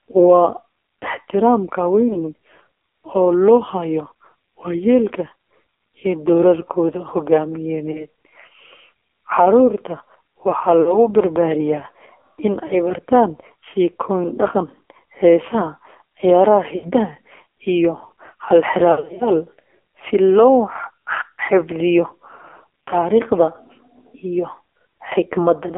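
From the first second, the AMR narrowband mobile codec at 5.9 kbps makes the speech buzzy and synthetic, and a spectrogram shows an empty band above 3.6 kHz and below 300 Hz. Lost AMR speech frames cause brief warbling dips at 2.08, 7.92, 10.82, 12.68 and 16.76 s, and a longer stretch of scattered dropouts from 18.92 to 19.29 s. In each gap the decoder repeats stale pitch at falling gain, which shows as smeared harmonics and a shrinking waveform envelope.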